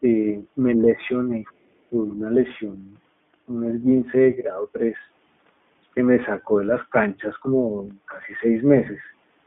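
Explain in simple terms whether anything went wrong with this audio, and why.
The whole recording was carried by the iLBC codec, a phone-call codec that squeezes the sound into small 20 ms chunks and keeps only the range between about 150 Hz and 3.5 kHz. Everything above that is simply gone, so the speech sounds muffled and boxed-in, like an ordinary phone line. The squeezing also leaves a plainly audible roughness, giving the speech a slightly buzzy, artificial edge from start to finish.

Twice, the speech briefly sinks, most likely speech suppressed in double talk. This happens when the echo canceller, the part of a call system that removes sound coming back from the loudspeaker, can't tell the talker apart from the other end and turns everything down. From 0.76 to 0.88 s the dip is mild, a slight softening. From 1.88 to 1.99 s it is much deeper, and the speech nearly drops out for about a tenth of a second.

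Between 1.44 and 1.53 s there is a faint trace of the other side's voice leaking through. The likely cause is that the other person's voice, playing from a loudspeaker, was picked up by the microphone and not fully removed by the echo canceller. Here it is very quiet, far below the main speech, and lasts less than a tenth of a second. It comes across as a faint scrap of a second sound in the background.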